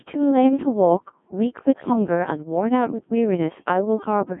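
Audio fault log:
Throughout: Codec 2 vocoder. The speech is rebuilt from pitch, voicing, energy and a coarse spectral envelope rather than the waveform, so it sounds heavily robotic and buzzy, confined to 150 Hz to 3.5 kHz. The degree of smearing fits a rate near 1.6 kbit/s.
1.76–1.93 s: bit errors on digital voice radio. Flipped bits, at a bit error rate of a few percent, corrupt the parameters of a handful of vocoder frames, consistent with about four. Pitch, level and timbre lurch and the speech breaks into warbling, bleepy gibberish.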